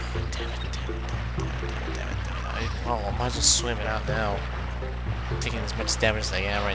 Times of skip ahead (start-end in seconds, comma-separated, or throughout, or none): none